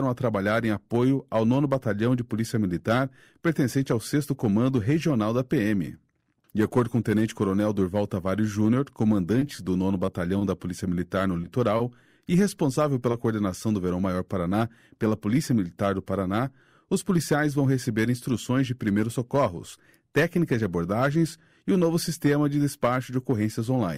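From 9.39 to 10.43 s the sound turns choppy and robotic, with small pieces dropping out in a broken rhythm. This is repeated packet loss: five separate gaps in about a second, none longer than 20 ms, each patched by carrying the previous sound forward. About 80 ms was filled in this way, roughly 8 percent of the stretch, and about 20 ms of real audio never arrived, so the patched fragments give it that mechanical edge.

At 11.41 to 11.45 s there is a brief smear where the sound wobbles for an instant. This is short concealed packet loss. About 20 ms never reached the decoder in time, and the receiver covered the hole by extending the last sound before blending back into the real signal. The same thing happens at 13.11 to 13.15 s, again with about 20 ms lost and replaced by continued sound.

Between those two, at 11.77 to 11.81 s, a sound is held slightly too long with a faint dip. This is a short stall from a late packet. 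The packet arrived about 20 ms behind schedule, so the jitter buffer ran dry and the receiver stretched the preceding sound by about 20 ms until the packet arrived. Playback then picked up where it had left off, so nothing is actually missing.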